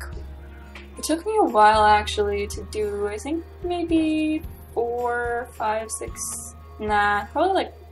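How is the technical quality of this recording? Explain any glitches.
No glitches can be heard anywhere in this recording. Nothing in it breaks up, drops out or shifts unexpectedly.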